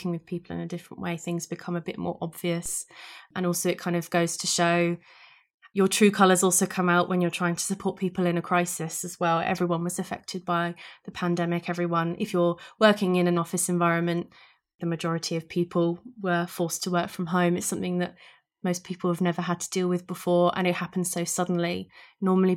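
A DC step at 2.66 s, just after "become a bit more", is a sudden shift of the waveform's zero line by about -32 dBFS. It lands as a brief low thump, and the offset then drains away through a 5 Hz high-pass while the speech continues unchanged.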